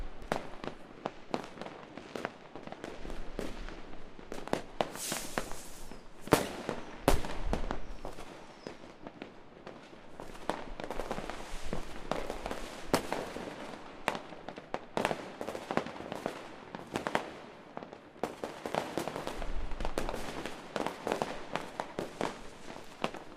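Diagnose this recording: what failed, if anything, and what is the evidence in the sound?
Nothing in this recording of everyday sounds points to a failure at any stage of the chain. No event in the audio gives evidence that calls for a diagnosis.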